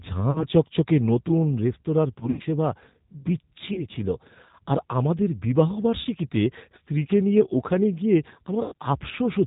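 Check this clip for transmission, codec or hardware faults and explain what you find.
Two faults are present: the speech runs through a low-bitrate codec for the whole clip, and there are five brief dropouts patched over by that codec.

G.729 codec: the speech has been coded with G.729A at 8 kbit/s, which models the voice from a few filter and pitch parameters and discards everything above 4 kHz. The result is plainly audible: a dull, band-limited voice with a rough, synthetic edge.

VoIP packet loss concealed by the speech codec: at 0.31–0.46 s, 2.20–2.43 s, 3.74–3.86 s, 6.01–6.07 s and 8.64–8.74 s, audio went missing in transit. Roughly 40, 100, 20, 40 and 80 ms were lost. The 2.2 s gap is scattered over about 200 ms, with its longest hole 60 ms. The decoder fills each gap by repeating its last pitch and filter at falling gain. These stretches sound like a buzzy, fading smear, and the voice stays weak briefly afterwards.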